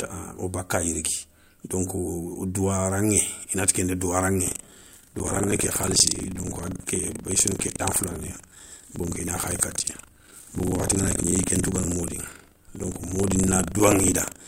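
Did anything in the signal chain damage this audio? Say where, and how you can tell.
Yes. From 4.44 s, right after "nati kenda", to the end, the speech carries a rattling, robotic buzz at 25 Hz. That is buffer tearing at the driver or buffer stage. The writer and the hardware reader of the ring buffer have slipped, so every 40 ms period contains a small slice of audio from around 70 ms earlier, hard-spliced at both edges. Unlike mains hum or a ground loop, the buzz stops in the pauses between words.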